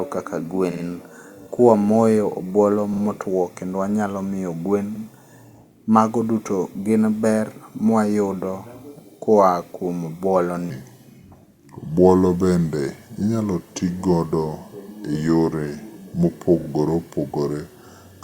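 Speech with repeated frames at 0.71–0.84, 2.93–3.01 (just before "kendo wanyalo miyo"), 4.95–5.03 and 16.59–16.68 s. Blocks of 40 to 80 ms replay exactly, a stutter rather than a smeared dropout. From 10.70 s to the end, a section at the wrong speed plays at 0.807× and about four semitones lower, likely from a wrong clock. Pitch and tempo drop together, unlike a pitch-shift.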